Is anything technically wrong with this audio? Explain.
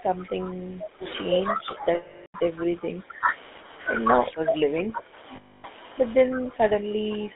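Yes, several problems can be heard.

GSM full-rate codec, throughout: the speech is carried by a vocal-tract model driven by sparse, regularly spaced pulses, with a line band of 250 Hz to 3.7 kHz, which fits 13 kbps full rate. The result is plainly audible buzzy, gravelly roughness and no bright top end.

Speech suppressed in double talk, 0.0 to 1.05 s, 1.28 to 3.26 s, 4.06 to 5.18 s and 6.25 s to the end: the level dips by about 10 dB in the first two spans and about 15 dB in the later two. This is likely an echo canceller ducking the talker while the far side also spoke.

Lost GSM frames, 1.94 to 2.35 s (400 ms) and 5.36 to 5.65 s (280 ms): missing frames were filled by repeating the last good frame's settings, which fits about 20 and 14 lost frames. The gaps are a rough, metallic, held ring.

Echo leak, 2.59 to 2.64 s: a brief, faint copy of the speech arrives about 153 ms late, roughly 20 dB below the speech. 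The likely cause is a loudspeaker on one side whose pickup wasn't fully cancelled before being sent back.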